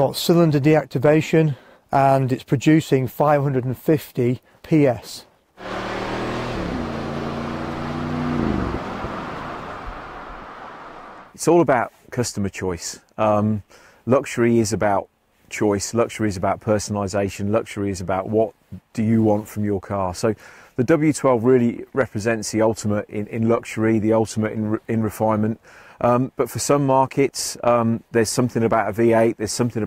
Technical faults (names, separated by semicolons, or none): none